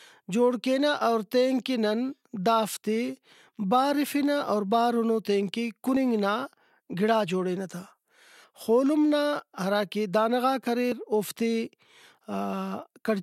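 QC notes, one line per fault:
1.01 s, 5.97 s and 10.92 s: audio missing between chunks. Each is a tiny skip of roughly 20 ms, with the two sides butted together and no gap of silence, right after "جوڑ کینہ" (before "اور تینکہ"), after "بارِفنہ اور بارُنو تینکہ", and after "نا ہراکہ دانہ غاک". They land about 4.95 s apart, every second boundary of a 2.5 s block, so it's likely the chain dropping a sliver each time it hands over between chunks.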